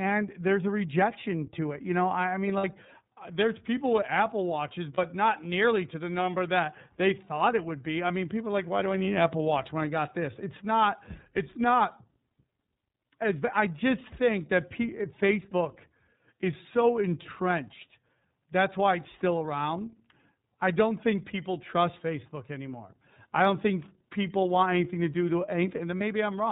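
Speech here passes through the iLBC codec for its whole length: nothing above 4 kHz, and a rough, synthetic edge that sounds like a low-bitrate 30 ms-frame mode rather than simple band-limiting. Lost iLBC frames hit at 2.58 s (about 60 ms), 4.94 s and 25.98 s (about 30 ms each). Each gap is filled with a brief buzzy, held vowel instead of silence, and the voice recovers at once.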